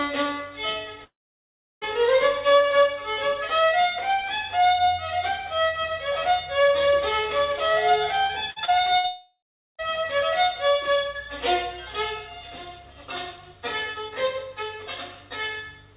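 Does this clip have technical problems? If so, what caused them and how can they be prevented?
Yes. The first fault is a long network dropout, twice, from 1.04 to 1.84 s and from 9.07 to 9.81 s. The likely cause is that the stream stopped reaching the receiver for about three-quarters of a second each time, so the receiver had nothing to play. It stretches the last sound into a brief fading buzz, then holds silence, roughly 0.7 s in the first gap and 0.4 s in the second, before the audio returns with that stretch gone. Prevention: use a stable, uncongested connection (wired rather than congested Wi-Fi), with a jitter buffer deep enough to ride out short stalls.

The second fault is repeated packet loss, giving a robotic sound from 8.26 to 9.07 s, leading straight into the second dropout. Packets went missing four times in that span, with the longest hole about 59 ms, and about a fifth of the stretch is patched. 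Each patch repeats the preceding sound, so the audio turns choppy, with small pieces missing. Prevention: enable forward error correction or packet redundancy and fix the network's loss, which this narrowband G.711 path, with nothing above 4 kHz, cannot hide.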